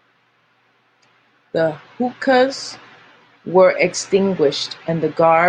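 No technical faults are audible.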